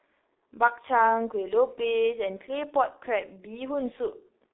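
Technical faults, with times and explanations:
Throughout, G.723.1 codec: the speech is muffled and hoarse, with smeared consonants, consistent with a coarse voice model running at roughly 6 kbit/s and updated only every 30 ms. The band is narrowed to about 300 Hz to 3.7 kHz, with nothing above 3.8 kHz.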